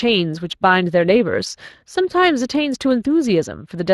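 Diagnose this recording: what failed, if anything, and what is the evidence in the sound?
The codec stage is the culprit: Speex coding damage runs the whole length of this speech clip and is plainly audible. The voice has a grainy, hoarse texture because the CELP excitation is coarsely coded, and that level of roughness fits a Speex stream at around 22 kbps.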